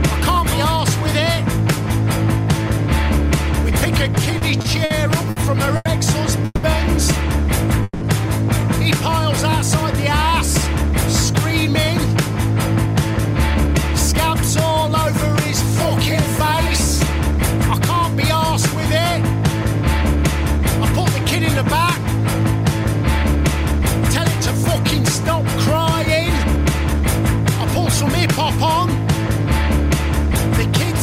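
From 4.15 to 8.03 s, packets kept arriving late, so the jitter buffer ran dry ten times. Each time the receiver stretched the last sound to fill the wait, 660 ms in all, the longest 180 ms. Nothing is lost, but the audio drags in repeated stalls (stutter).

Later, the buffer held more audio than its target, so the receiver trimmed tiny pitch-period slices to catch up. This jitter buffer speed-up runs at 103% from 10.83 to 14.89 s, removing about a tenth of a second, then at 102% from 20.01 to 28.68 s, removing about a fifth. The pitch stays the same, but the audio runs slightly faster.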